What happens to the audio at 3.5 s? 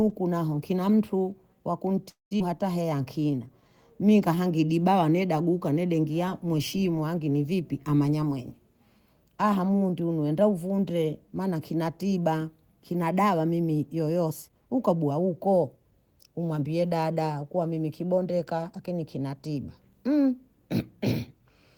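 At 3.5 s the speech is inside a jitter buffer slow-down running from 2.84 to 4.70 s, just before "neda guka neda engia". The receiver repeats single pitch periods to rebuild its reserve, adding 158 ms and playing at 92% speed. Pitch is unchanged but sounds are drawn out. On a spectrogram, harmonics stay level while syllables stretch; the waveform shows near-identical repeated cycles.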